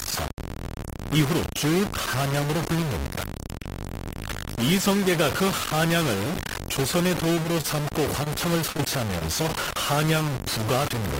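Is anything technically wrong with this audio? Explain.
Yes. Four kinds of fault are audible in this speech.

Low bit depth without dither runs through the whole clip. Quiet passages turn gritty and coarse, and the grain shifts with the speech. The quantisation error sits nearly as loud as the signal itself. The cause is likely truncation to about 3 bits with no dither, so the error tracks the waveform instead of forming a steady noise floor.

Repeated packet loss (robotic sound) occurs from 6.91 to 7.66 s. Several short gaps arrive in quick succession, the longest about 28 ms, and together they account for about 10% of that span. Each gap is filled by extending the preceding sound, which gives a choppy texture with pieces missing. Around 40 ms of real audio is lost.

Short concealed packet loss appears at 8.24–8.28 s, 8.77–8.81 s and 9.19–9.23 s. In each case about 20 ms of audio never arrived and was patched by continuing the last sound, then crossfaded back into the real signal. 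The result is a brief smear or wobble.

A short stall from a late packet occurs at 8.72–8.77 s. The jitter buffer ran dry, so the receiver held the current sound for about 30 ms until the packet turned up, then resumed where it left off. Nothing is missing, but a sound lingers with a slight buzz or dip.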